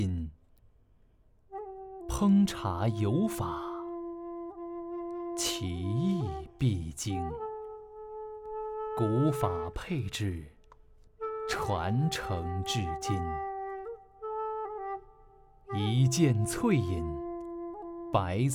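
From 9.28 to 12.53 s the audio carries periodic clock jitter. The converter clock is being wobbled at around 1 kHz, placing sidebands about 1 kHz either side of every component, strongest on high-frequency content, which gives a rough, metallic edge absent in quiet passages.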